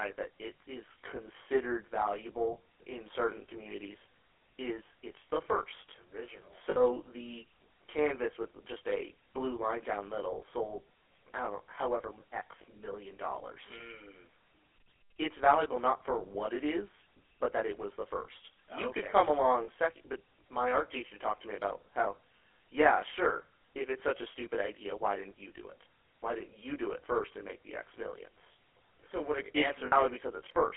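From the start, the speech has a rough, slightly doubled colour from channel delay (comb filtering). One channel arrives around 20 ms late, and the mono sum cancels content at evenly spaced frequencies, with the first notch near 30 Hz and fixed notches continuing up through the band.

Throughout, the GSM full-rate codec audibly damages the speech. It sounds buzzy and gravelly, and the band is confined to roughly 300 Hz to 3.4 kHz, which fits a 13 kbps GSM full-rate telephone path. The pulse-driven excitation model produces that characteristic rough texture.

Lost GSM frames occur four times. At 6.7 s, a 60 ms gap just before "the canvas with just" is filled by the previous frame's parameters repeated, giving a brief metallic, held ring. At 13.78 s, just after "million dollars", there is a 20 ms repeat. At 19.64 s, between "you okay could come" and "second but my art", the repeat lasts 40 ms. 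At 29.86 s there is another 60 ms ring.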